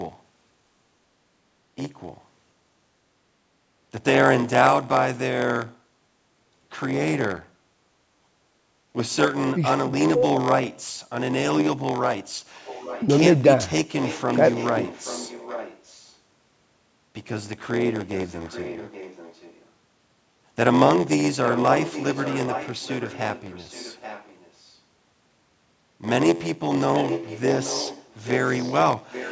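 A block size mismatch (padded) runs through the whole clip. Each 512-sample block read by one stage arrives only partly filled, and the rest is zeros. That gives a steady buzz at 86.1 Hz. The speech also runs slow, at 0.938 times normal speed, with its timbre unchanged.

From 9.74 to 11.45 s, the speech dips, falling by as much as about 40 dB for roughly one and a half seconds in total. This is likely speech suppressed in double talk. The echo canceller turned the talker down while the far side was also speaking.

Echo leak follows from 12.54 to 13.07 s, 14.0 to 16.14 s, 18.17 to 19.65 s, 21.44 to 24.75 s, 26.95 to 28.74 s and 29.1 to 29.31 s. A copy of the speech returns 826 ms late, about 15 dB down, and about 20 dB down at 18.17 s. The likely cause is a loudspeaker's echo getting past the canceller.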